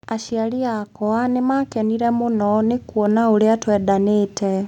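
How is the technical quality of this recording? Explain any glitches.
The level jumps abruptly at 1.02 s, when everything in the speech clip gets louder at once, by about 4 dB. The voice and the room noise behind it rise together, in a single step rather than a fade, and stay at the new level. This is a microphone volume step-up: the calling software judged the input too quiet and raised the device's input volume in one move, which is why the noise floor climbs along with the voice.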